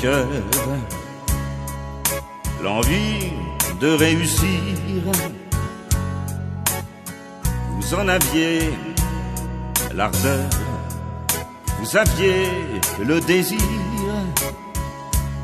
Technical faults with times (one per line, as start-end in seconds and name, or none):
none